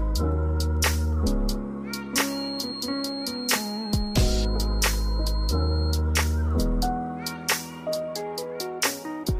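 A feedback whistle sits behind the sound from 2.23 to 6.04 s, a thin, steady tone near 4.2 kHz roughly 15 dB below the main signal. It is likely caused by a loudspeaker-to-microphone loop held just at the edge of feedback, so one frequency rings on without building up. Unlike mains hum or electrical whine, it is a single high pitch with no harmonic series, and it swells and fades slowly in level rather than holding perfectly constant.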